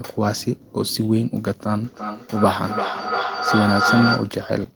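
From 1.86 to 4.42 s, feedback howl builds near 1.5 kHz. A microphone-loudspeaker loop keeps gaining. It pulses roughly every 300 ms, near speech level.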